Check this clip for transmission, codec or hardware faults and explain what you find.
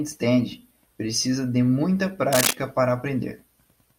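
One hardware fault is audible. From 2.32 to 2.53 s there is cable scratch noise. A dense, uneven burst of scratching sits over the speech at about the same level. The likely cause is a worn cable or connector being moved, so its contact resistance changes rapidly.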